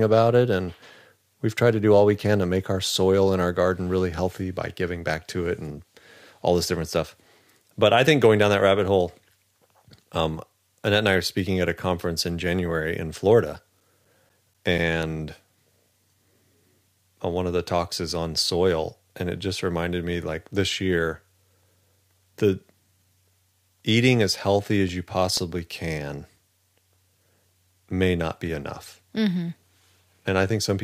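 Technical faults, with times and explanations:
13.32–15.27 s: CD scratch ticks. Nine regular ticks, about five a second, of uneven strength. A scratch exceeds error correction each disc turn; longest near 10 ms.
23.91–25.37 s: CD scratch ticks. Seven shorter ticks, about five a second, the longest about 4 ms. The player interpolates or mutes unrecoverable samples once per revolution.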